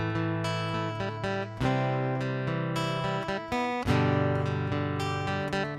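No technical faults can be heard anywhere in this audio.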